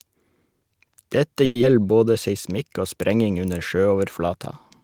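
From 1.45 to 1.64 s, a long network dropout is the likely cause. Audio stopped arriving, and the receiver covered about 170 ms by stretching the last sound into a fading buzz or hiss, never reaching silence. Playback then resumed with roughly 60 ms simply missing.

Between 1.75 and 2.04 s comes a jitter buffer slow-down. The receiver repeated pitch periods or bits of pauses to rebuild its reserve, adding 56 ms. The sound runs at 84% speed at unchanged pitch, drawn out just before "seismikk og sprenging under".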